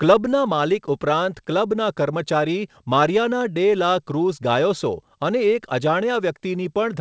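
No faults to report in the speech: the top end stops at 8 kHz, which points to a wideband call path such as G.722 and is expected rather than a defect.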